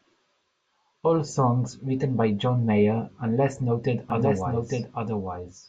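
A speech recording in which, from 4.10 s to the end, a second copy of the same audio appears underneath, trailing roughly a second behind and sitting about 5 dB quieter. It enters abruptly, is full-band, and carries no decay or added room colour, so it reads as a clean repeat rather than an echo. This doubled audio track is likely caused by the signal being captured twice, once through a slower path, or by an edit leaving two out-of-step copies.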